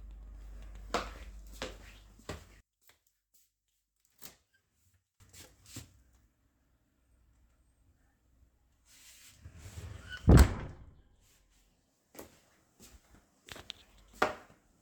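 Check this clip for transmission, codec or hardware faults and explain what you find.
One fault stands out. From 2.61 to 5.20 s the sound collapses to a faint trace about 26 dB down, likely one channel inverted, cancelling shared content when summed to mono.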